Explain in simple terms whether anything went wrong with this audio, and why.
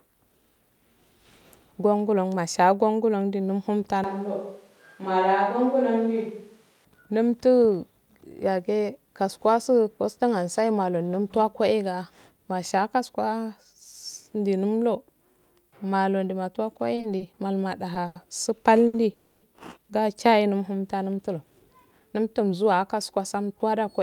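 A few things go wrong here, mostly toward the end.

From 4.04 to 6.85 s there's a switch to a distant microphone. The speech suddenly turns roomy and hollow with thinner bass, then snaps back just before "namttu yagu." It stays about as loud and the background stays quiet, so the likely cause is the close mic dropping out and a farther one filling in.

Between 16.95 and 17.40 s you get repeated stalls (stutter). Packets kept showing up late, so the receiver held the last bit of sound four separate times, each under about 30 ms and adding up to roughly 90 ms. Nothing is lost, but it drags and stutters.

Two short stalls from a late packet follow, at 18.07 s (80 ms) and 18.87 s (60 ms). Each time a packet didn't arrive on schedule, so the sound just before it gets stretched a touch too long, maybe with a faint buzz, and then picks up right where it left off.

At 19.13 to 19.44 s there's a call audio freeze. 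The sound hangs for about 290 ms as a fading buzz instead of going silent, then carries on with nothing skipped. Likely the packets were held up somewhere along the network.

From 21.18 s to the end there's a jitter buffer speed-up. After the earlier delays piled up, the receiver trimmed tiny slices out to catch up, about a fifth of a second in total. The speech runs roughly 8% fast at the same pitch and sounds a bit hurried.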